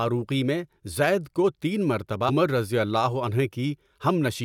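At 2.28 s the compressed stream carries damaged data: a short run of bytes in the encoded speech is corrupted, so the decoder cannot read those frames correctly, loses its place and has to hunt for the next valid frame header before it can resume. What comes out is a brief glitch lasting under two hundredths of a second, breaking the flow of the speech.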